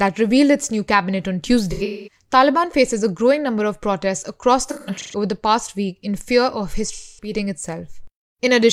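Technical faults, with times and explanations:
1.71–2.21 s, 4.66–5.16 s, 6.87–7.33 s: AAC frame loss with concealment. After "its new cabinet on", "number of protests across" and "week in fear of", about 0.3, 0.3 and 0.26 s of coded audio is lost, the first two in short runs. The decoder rebuilds each gap from the last good spectrum, so these spots sound smeared, noisy or phasey.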